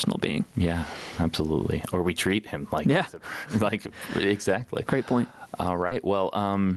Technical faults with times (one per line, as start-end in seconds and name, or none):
0.00-6.76 gain pumping
5.87-5.93 short concealed packet loss